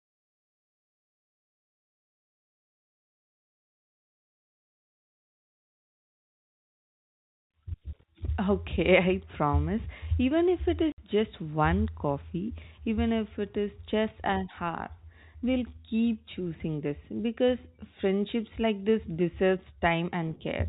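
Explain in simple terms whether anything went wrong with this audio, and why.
Between 10.92 and 10.98 seconds the speech drops out completely for 60 ms: packet loss filled with silence. Data went missing in transit and the receiver played nothing instead, and the gap's length fits three lost 20 ms packets. The telephone-band G.711 coding itself sounds intact.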